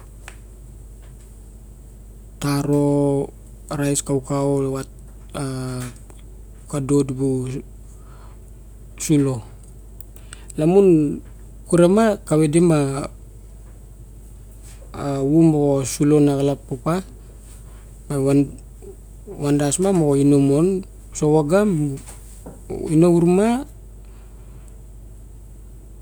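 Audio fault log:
No faults found: the speech signal stays continuous and stable at every point in the clip.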